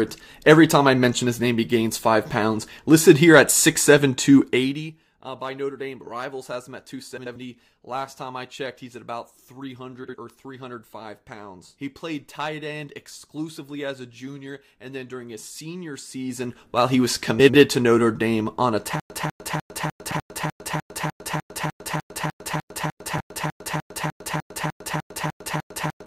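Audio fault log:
4.39–4.92 s, zipper noise: the level was pulled down by about 15 dB in bare 1 dB jumps, roughly forty per second, with no smoothing between them. Each jump puts a tiny step into the waveform, and that step clicks. Over this half second the clicks fuse into a fast ticking, zipping texture laid over the sound as it drops, rather than a clean fade.
7.17–7.36 s, 10.04–10.15 s, 17.39–17.54 s, 20.10–20.20 s, 23.18–23.20 s, frames out of order: in each spot, two adjacent runs of decoded audio were played in swapped order. The runs last 92.9, 46.4, 62.4, 82.7 and 21.8 ms, which fits blocks of two to four frames. The content skips forward and then back, heard as a brief garbled flutter. No time goes missing.
19.00 s to the end, stutter with silent gaps: the stream stopped delivering new audio, most likely a stalled player or connection retrying. Each retry replays the same 197 ms fragment, followed by 103 ms of dead digital silence. 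The result is a stuck burst recurring every 300 ms, 23 times, until the clip ends. Whatever should have played after 19 s never arrives, and the swaps at 20.10 and 23.18 s sit inside this looping stretch.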